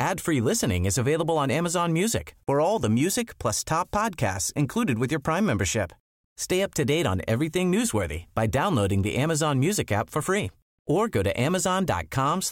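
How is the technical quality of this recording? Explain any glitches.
Good news: there's nothing to explain here, as no glitches or technical faults turn up anywhere in this speech recording.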